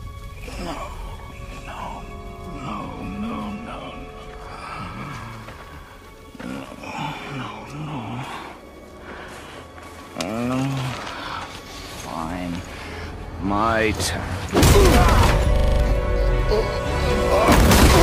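The playback system froze at 15.56 s, and while it hung the sound hardware kept replaying the same 40 ms stretch of its ring buffer. This system hang loop runs until 15.8 s. The fragment cycles six times at 25 Hz, exactly identical each pass. Roughly a fifth of a second of the real audio is lost and never heard.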